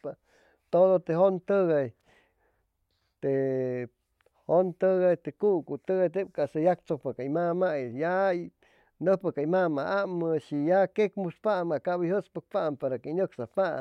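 Listening closely to the speech, nothing stood out as a technical fault at any point.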